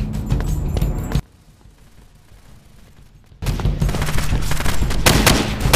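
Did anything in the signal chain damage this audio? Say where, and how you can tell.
Yes. One channel inverted, from 1.20 to 3.42 s: the sound drops by about 28 dB, leaving only a faint residue, as the centred content cancels when the two channels sum to mono. That points to a polarity reversal, likely in the analogue wiring.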